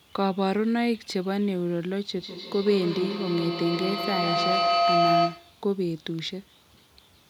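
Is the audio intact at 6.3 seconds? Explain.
Yes, at 6.3 seconds the speech plays through intact, with no dropout, click, distortion or other fault at that point.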